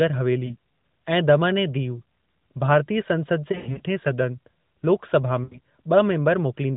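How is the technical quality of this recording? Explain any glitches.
The recording is narrowband mobile audio, consistent with AMR-NB at about 12.2 kbps with only light codec colouring, and it has three short breaks from lost AMR speech frames.

At 0.46–0.56 s, just before "ऐं दमन ऐं दीव", there is a brief warble that fits a single lost 20 ms frame. At 3.52–3.80 s, before "सदन लोक सभा", roughly 180 ms of losses are spread over about 280 ms, with the longest run near 100 ms, so the sound stretches, sags and recovers unevenly. At 5.44–5.59 s, right after "सदन लोक सभा", about 80 ms is lost and the sound smears and fades.

In each case the decoder filled the gap by repeating the last good pitch and vocal-tract settings at falling gain. Unlike a plain dropout, the sound drawls and fades instead of cutting to hard silence or clicking.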